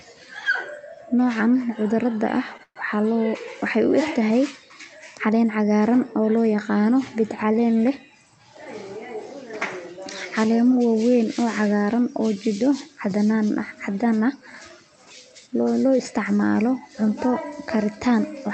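Right around 2.57 to 2.61 s there's a short stall from a late packet: the jitter buffer ran dry, so the receiver stretched the last bit of speech by about 17 ms until the packet turned up. Nothing's lost, but that sound hangs a touch long with a slight buzz or dip.

Hard on its heels, 2.63 to 2.78 s, comes a call audio freeze. The held sound buzzes or hisses and fades, then goes quiet for about 70 ms, adding roughly 125 ms in total before speech picks up where it left off. The likely cause is packets held up in transit, emptying the buffer again.

Later, from 13.64 to 14.12 s, you get a jitter buffer speed-up. The buffer had built up extra delay, so the receiver trimmed tiny pitch-period slices, roughly 70 ms altogether, and the speech runs at about 111% speed. Pitch stays put, but it sounds rushed. The Opus call path behind all this tops out around 8 kHz.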